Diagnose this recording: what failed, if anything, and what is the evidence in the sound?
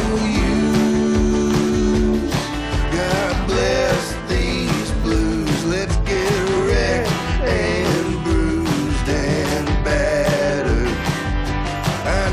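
From the start to about 5.55 s, a steady buzz near 345 Hz sits on the sound and rises and falls with its level, then stops abruptly. This is a filter restarted on every block, in the processing stage at the driver or buffer level. Each processing block begins from silence instead of carrying the filter's state forward, so a small transient is added at every block boundary. The 345 Hz repeat rate fits a 128-sample buffer.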